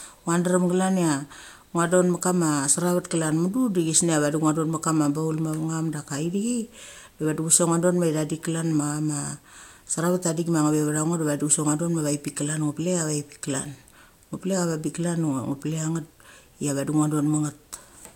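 No technical faults are audible.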